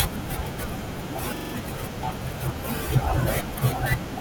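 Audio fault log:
1.37–1.54 s, repeated buffer: a 43 ms chunk of speech plays five times in a row (fits a 2048-sample buffer), so you get a quick stutter with a hard join at each repeat.
2.77–2.82 s, repeated buffer: same 43 ms chunk doubled once, a brief hiccup.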